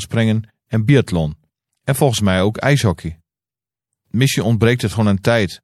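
Speech, with a watery, swirly treble and smeared consonant onsets throughout, the mark of MP3 compression at a low bitrate, likely around 64 kbps, rather than plain filtering, since the damage flickers from moment to moment. At 0.88 s, compressed frames are skipped: the audio jumps ahead by about 30 ms, one 26.1 ms frame. The join is a soft smeared blip, not a hard click or a silent gap.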